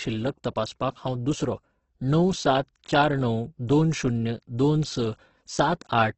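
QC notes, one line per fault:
Throughout, Opus compression: the speech sounds rough and grainy rather than swirly, with nothing above about 8.2 kHz. This likely comes from Opus running in its CELT music mode at wideband. When the bit budget runs dry, the encoder keeps each band's energy but fills missing detail with folded lower bands or noise. The result is heavy damage, and the harshness fits a bitrate around 12 kbps.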